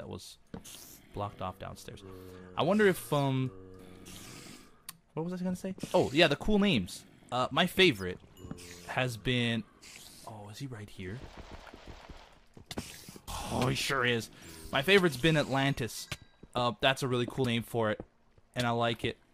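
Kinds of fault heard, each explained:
Compressed frames skipped: at 3.78, 5.93, 13.28 and 17.43 s the sound jumps ahead by roughly 40 to 100 ms, as whole coded frames go unplayed.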